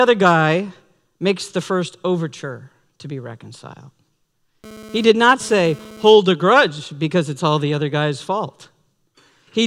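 A hard, raspy buzz cuts into the speech from 4.64 to 6.16 s, sitting about 21 dB below the speech and pitched at roughly 217 Hz with a dense stack of harmonics that bear no relation to the speech itself. This is GSM phone buzz: a nearby 2G handset transmitting in bursts about 217 times a second, which the audio circuitry rectifies into sound. The single burst of about 1.5 s points to a data transfer rather than a call.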